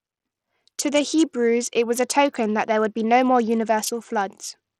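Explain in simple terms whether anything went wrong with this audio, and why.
Bluetooth SBC compression, heard from start to finish, is the likely cause of the damage here. The speech sounds dull and gritty, with the crisp top end thinning out and flickering in and out, and a rough, sandy noise clinging to each sound. SBC splits the audio into a few frequency bands and shares out a limited data budget among them. When the budget is tight, the quieter high bands get little or nothing and the rest are stored coarsely.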